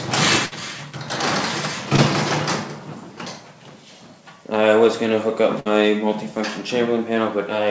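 At 0.46 s to 0.54 s there is a burst of packet loss. A run of audio arrived too late or not at all. The receiver stretched the last sound for about 56 ms and faded it down. It sounds like a brief held buzz or fading hiss. When the audio resumes, about 60 ms of the original is simply gone. Nothing above 8 kHz is present, which fits a G.722 call path at 64 kbps.

From 1.96 s to 2.00 s there is a short concealed packet loss. About 20 ms never reached the decoder in time. The gap was patched with roughly 16 ms of synthetic continuation, then blended back into the real signal. The result is a quick smear or wobble rather than a dropout.

At 5.60 s to 5.67 s the burst of packet loss repeats. Again about 56 ms of stretched, fading sound covers a 60 ms hole. The audio picks up further along with that stretch missing.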